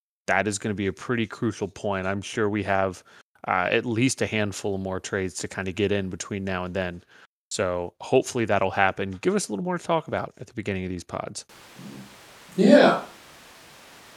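Speech recording; from 11.49 s, just after "beginning of these pods", a switch to a distant microphone likely replaces the close one, leaving the voice suddenly roomy, hollow and bass-light to the end, at much the same level, with faint room noise beneath.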